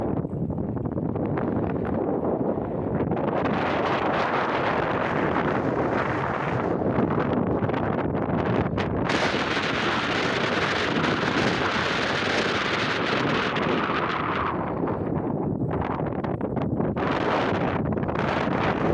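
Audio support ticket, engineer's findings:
No audible faults found in this recording.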